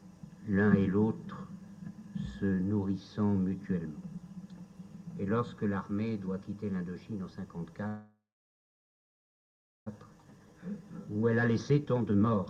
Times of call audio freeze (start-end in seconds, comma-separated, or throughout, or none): 7.87-9.88